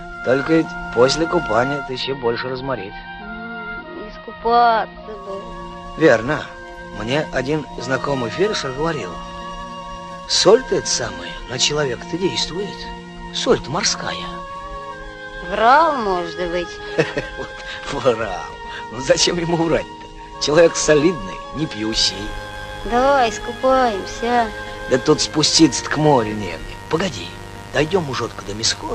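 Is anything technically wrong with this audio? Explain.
Yes, two faults are audible.

From 1.73 s to 5.37 s there is digital radio blending to analogue. The receiver lost its digital stream and cross-faded, over roughly 318 ms, to the AM broadcast of the same station. AM is band-limited, so the treble drops, the level drops by about 3 dB, and a low hiss appears some 35 dB under the signal. On a spectrogram the upper band empties abruptly above the AM cutoff and a faint noise floor fills the gaps.

From 21.92 s to the end there is mains buzz. Sharp switching spikes from a dimmer, rectifier or unshielded lead arrive twice per 50 Hz cycle, so the hum is full of harmonics of 50 Hz stretching into the kilohertz range. It is a steady, raspy buzz at about 20 dB below the signal. A spectrogram shows evenly spaced horizontal lines at multiples of 50 Hz, and a zoomed waveform shows spikes repeating every 10 ms.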